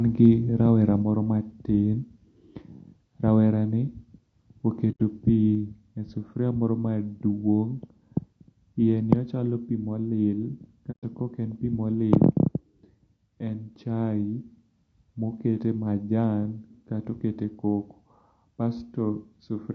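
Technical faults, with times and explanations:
Throughout: low-delay AAC compression. The speech sounds rough and grainy, with noise between harmonics and a thin top band. Coarse coding at a low bitrate likely causes this, at a rate that fits AAC-ELD near 32 kbps.
1.02 s and 5.55 s: microphone volume stepped down. Level drops suddenly by about 4 dB, then about 2 dB just before "e sufuria moro". Call software likely lowered the input volume in single steps.
4.91–5.01 s and 10.91–11.04 s: AAC frame loss with muting. Sound fades into soft-edged holes of 90 ms and 120 ms, the second just before "ka ok en pi". Missing frames decode as silence.
12.13–12.25 s: microphone overload. Peaks after "ok en pi moli" gain a harsh, crackling edge. Input volume was likely set too high, driving the converter about 4 dB past its limit and flattening a small share of samples.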